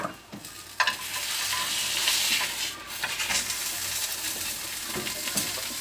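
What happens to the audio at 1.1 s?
Nothing goes wrong at 1.1 s; the sound carries on intact through that moment, with no dropout, click or other fault.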